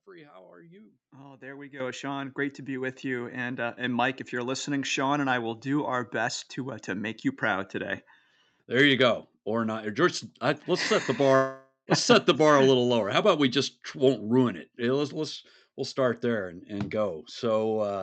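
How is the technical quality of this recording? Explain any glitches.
The recording carries two glitches: a sudden level jump near the start and a gap about two-thirds of the way through. It comes across an Opus call path whose top end stops around 8 kHz.

Microphone volume stepped up, at 1.8 s, right after "there we": the call software judged the input too quiet and raised the microphone gain in a single step of about 11 dB. The voice and the background noise jump louder together, mid-phrase, and stay at the new level.

Long network dropout, from 11.35 to 11.90 s, after "I let's set the": roughly half a second of audio likely never arrived, so the receiver stretched the last sound into a fading buzz, ending in about 0.1 s of near-silence. Speech resumes with "let's set the", and the missing portion is gone.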